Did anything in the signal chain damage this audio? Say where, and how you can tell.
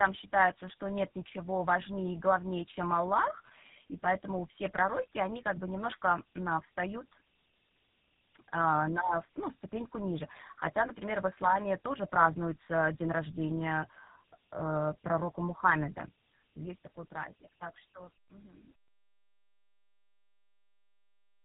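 Yes. Tandem speech coding affects the whole clip at the codec stage. The speech is rough, muffled and warbly, with nothing above 3.8 kHz. That fits G.729A and GSM full rate joined through G.711, so each coder re-encodes damage the previous one left.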